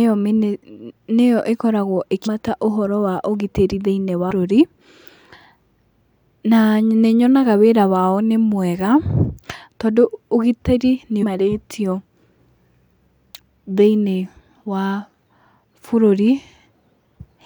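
At about 2.25 s, between "nĩyo ĩkoragwo" and "ũhoro wa ũgitĩri", and again from 11.22 to 11.24 s after "tondũ ũgitĩri nĩ", damaged data in the compressed stream makes the decoder misread frames and hunt for sync. The result is a brief glitch in the speech.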